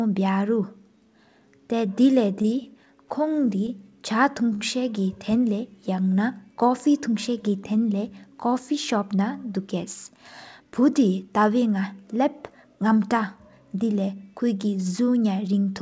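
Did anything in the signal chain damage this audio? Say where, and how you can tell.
Yes. All of the damage happens at the network and jitter-buffer stage of a call path. The band stops at 8 kHz, which points to G.722, likely at 64 kbps, and that band limit is inherent to the codec rather than a fault.

Repeated stalls (stutter) run from 2.42 to 3.12 s. The speech catches four times there, with about 65 ms of filled-in sound in total and the longest hold lasting 23 ms. Each time, the receiver's buffer ran dry and it extended the last sound until packets arrived. Nothing is actually lost, so these are not dropouts with silent holes. The effect is a halting, dragging rhythm, and because the holds come in a cluster they are set apart from a single late packet.

Jitter buffer slow-down follows from 3.29 to 3.92 s. The speech plays at about 95% speed, with 42 ms added, because the receiver repeated pitch periods to rebuild its reserve. 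The pitch stays where it was, and that is what separates this from a clock or sample-rate mismatch, which would drag the pitch down along with the tempo. What you hear is slightly drawn-out syllables rather than stutters.

A short stall from a late packet occurs between 4.53 and 4.63 s. One sound is held for 73 ms, and the playout delay then sits 73 ms higher. This tells us the packet was late, not lost: the receiver waited, stretched the last sound, and resumed exactly where it had stopped. There is no skipped material, unlike packet-loss concealment, and it is a single event rather than a train of catches.

Jitter buffer speed-up runs from 9.58 to 10.61 s. Speech plays at about 107% speed, with roughly 70 ms trimmed away, as the receiver cut pitch periods to shed excess delay. It sounds hurried but keeps its normal pitch. A too-fast playback clock would raise the pitch as well, which is why this points to time-scale adjustment in the buffer rather than a rate error.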